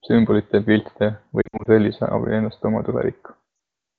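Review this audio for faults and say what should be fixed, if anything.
Lost AMR speech frames occur at 1.42 to 1.69 s and again at 3.55 to 3.59 s. In the first stretch, about 140 ms of audio drops out, scattered over 240 ms, with the longest gap lasting 60 ms. The decoder fills each gap by repeating the last good pitch and vocal-tract parameters at falling gain. The result is a warbling, smeared sound that fades quickly on this wideband stream and comes back briefly rough. The second event is a 40 ms dip. The coded speech at 23.85 kbit/s sounds clean around these gaps, so the fault lies in frame delivery. To prevent it, improve the radio link margin or add redundancy so that fewer frames fail their checksum.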